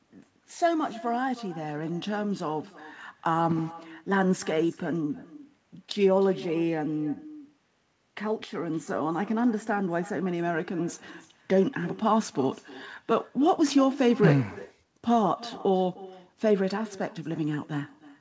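Echo with no canceller runs through the whole of this speech recording: each phrase is trailed, roughly 300 ms later, by a faint, thin copy about 20 dB down. The far end's loudspeaker is feeding its microphone, and nothing strips that return before it travels back; the call band stops at 8 kHz.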